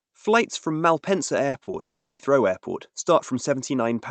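Short concealed packet loss at 1.49–1.55 s, 1.63–1.69 s and 1.71–1.75 s: late packets were filled by extending the last sound, giving brief smears rather than true gaps. A long network dropout, likely, follows at 1.79–2.21 s. A fading buzz collapses into near-silence for about 0.38 s, and the audio resumes with that portion missing.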